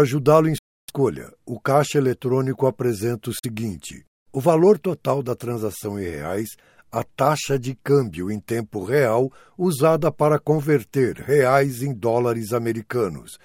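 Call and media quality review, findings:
Silent gap 0.58 to 0.91 s (about 0.3 s), second 3.39 to 3.46 s (about 46 ms). Likely Bluetooth dropout: late packets discarded, output muted. Waveform shows flat silence with abrupt or briefly faded edges; spectrogram shows full-band blank column. Audio resumes time-advanced, skipped material lost.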